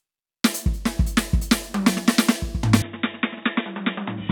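At 2.82 s the music abruptly goes dull and boxy, with nothing left above 3.8 kHz, drops a few dB in level and picks up a faint new noise floor, with no gap at the change. That's likely the input switched to a poorer device.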